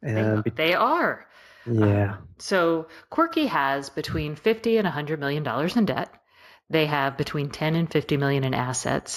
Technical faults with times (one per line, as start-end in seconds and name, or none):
0.00-9.17 imaging from linear upsampling